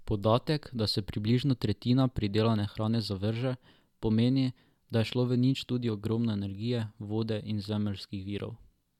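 No technical faults can be heard anywhere in the recording, and the signal holds steady throughout.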